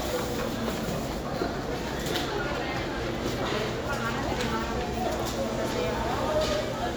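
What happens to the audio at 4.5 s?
Nothing goes wrong at 4.5 s; the sound plays through that moment intact, with no dropout, click or distortion.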